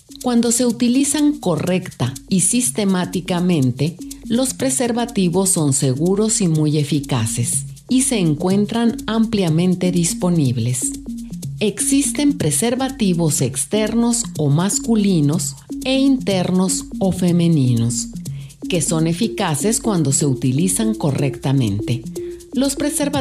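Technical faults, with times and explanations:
No technical faults are audible anywhere in the recording.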